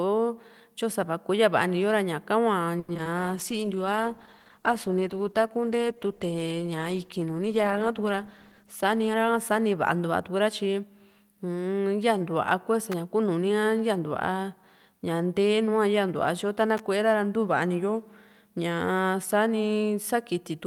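From 2.79 to 3.07 s the speech turns choppy and robotic. This is repeated packet loss: four gaps, the longest 90 ms, were patched by stretching earlier sound, covering nearly half that stretch.

From 3.19 to 10.43 s the voice goes rough, watery and dull. A call bitrate drop from 48 to 15 kbps, held at its lowest for about 5.5 s, forced coarse, band-limited coding.

Between 8.63 and 9.67 s the speech sounds hurried at unchanged pitch. A jitter buffer speed-up trimmed about a tenth of a second of pitch periods, running the audio at 108% speed.

At 12.92 s and again from 16.77 to 16.80 s, sharp snaps sit on top of the sound. These are likely electrical switching spikes, arcs from nearby equipment picked up by the audio line.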